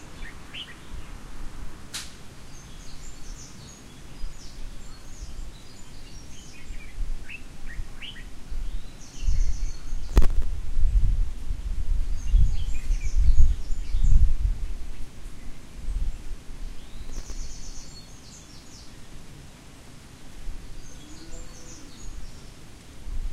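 At 10.09 s the sound breaks into a gritty burst of processor overload crackle lasting about 0.34 s, and the same tearing returns from 17.05 to 17.35 s. The processor fell behind on very short buffers, around a millisecond or two each, and missed roughly thirty deadlines in a row, each time replaying a scrap of old audio. On a waveform this shows as a run of hard-edged steps; a spectrogram shows dense vertical broadband streaks.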